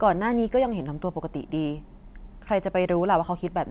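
The speech arrives over a call path with nothing above 4 kHz, which fits narrowband G.711 mu-law coding at 64 kbps, and no technical faults can be heard at any point in the clip.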